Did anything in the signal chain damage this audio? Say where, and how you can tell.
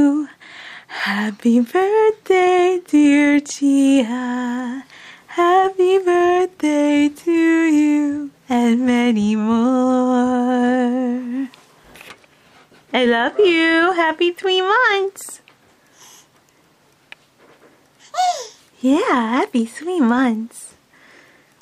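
No, nothing in the signal chain damaged this audio.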